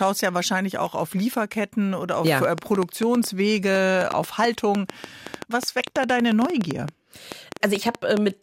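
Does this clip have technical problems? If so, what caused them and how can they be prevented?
Yes. From 2.27 s, just after "oder auf", until 8.18 s, a train of clicks runs over the speech: around forty similar pops at roughly 6.8 per second, unevenly spaced, the loudest about 15 dB above the speech. The likely cause is electrical interference or a faulty connection or power supply injecting pulses. Unlike clipping distortion, the clicks don't follow the speech and carry on through the pauses. To prevent it, keep cables away from noisy equipment and use a stable, properly grounded interface.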